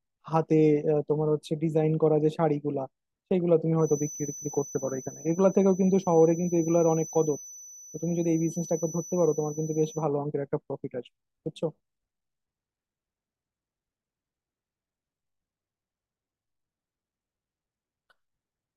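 From 3.75 to 10.1 s, the loudspeaker-to-microphone loop likely sits right at the edge of feedback, sustaining a single 6 kHz tone without running away. The result is a thin feedback whistle, swelling and fading slowly, some 20 dB beneath the speech.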